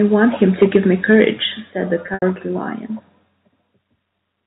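Speech over a telephone-band G.711 line shows microphone overload from 0.42 to 0.77 s, about 4 dB over, and again from 1.1 to 1.25 s just before "said the", about 2 dB over. Roughly 2% of samples get flattened, likely from an input gain set too hot. The microphone volume steps down by about 2 dB at 0.63 s and about 4 dB at 1.62 s, just before "said the", likely as the call software pulls the input level back. Packet loss with pitch repetition follows "said the" from 2.06 to 2.22 s. About 100 ms goes missing across 160 ms, and the 80 ms run buzzes briefly on a held pitch before fading toward silence.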